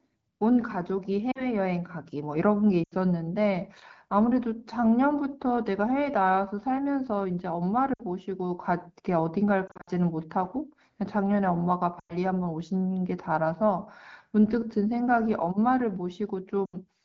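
Lost AMR speech frames occur at 1.31–1.47, 2.83–2.95, 7.93–8.03, 9.68–9.90, 11.99–12.17 and 16.65–16.76 s. Corrupted frames failed their checksum, so the wideband decoder stretched the last good pitch and vocal-tract settings at falling gain. Each gap of 40 to 140 ms sounds like a warble dropping to near silence. The 9.68 s event is a scatter of short dropouts, the longest about 60 ms.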